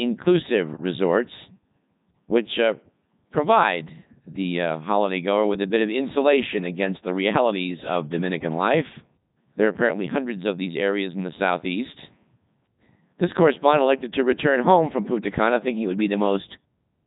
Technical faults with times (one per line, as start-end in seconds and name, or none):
0.00-17.06 Codec 2 vocoder